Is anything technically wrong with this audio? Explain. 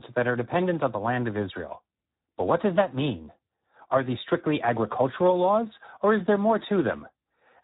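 Yes. The whole speech clip carries heavy Speex codec damage. The codec models speech with very few bits for the excitation, which fits a low setting near 8 kbps. Voices sound hoarse and noisy. Nothing reaches above 3.8 kHz, so the sound is dull.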